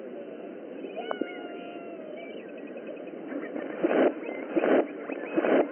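Nothing in this audio stands out as a fault; it runs along with no glitches or interruptions to point to at any moment.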